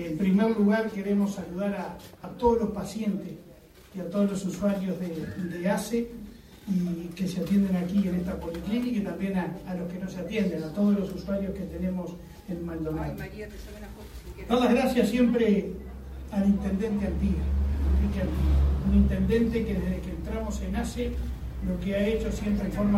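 At 2.24 s and again at 12.4 s the sound jumps forward with no gap, each time losing roughly 40 ms. This is likely a dropped buffer (overrun): samples were overwritten before being read, and the surrounding audio was spliced together.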